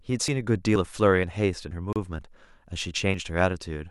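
Tiny skips cut into the speech at 0.28, 0.76, 1.24 and 1.71 s. At each one the sound jumps forward with no pause, as if a sliver of about 20 ms had vanished. Between 1.93 and 1.96 s a 31 ms gap opens, its edges smeared, and then the speech carries on from where it stopped. This is a gap at a join of encoded pieces: separately encoded segments were spliced untrimmed, keeping the start delay and end padding. The skips continue at 2.19, 2.67 and 3.14 s, about every half second. That regular spacing is likely audio missing between chunks of about 0.5 s, lost each time the recorder closes one block and opens the next.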